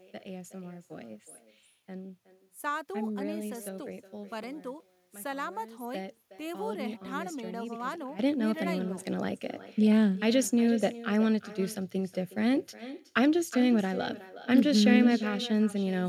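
From the very start the speech carries an echo with no canceller working on it. Each phrase comes back roughly 0.4 s later as a quieter, thinner copy, about 16 dB below the original. That delay is the round trip: the far end is playing the call over a loudspeaker, its mic picks it up, and nothing strips it out before it's sent back. It shadows everything said, right through to the end.

At 4.44 s the whole level, background noise included, drops abruptly by about 12 dB and stays down until 5.80 s, when it snaps back. Then at 8.19 s it leaps up by about 12 dB and stays there to the end. Both changes land from one moment to the next with no fade at all. That's a sudden gain jump, likely a digital gain setting or bit shift applied without any ramp.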